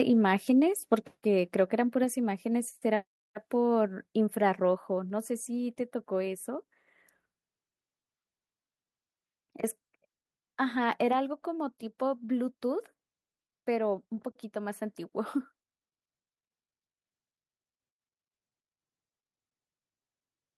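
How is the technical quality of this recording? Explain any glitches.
The recording has two sudden drops in level early in the speech, both consistent with a microphone volume stepped down. At 1.02 s the whole signal, voice and background alike, falls by about 4 dB in one go, and at 2.04 s it drops again by about 3 dB. The likely cause is the call software judging the input too hot and lowering the device's input volume in discrete steps, so you hear two abrupt steps down.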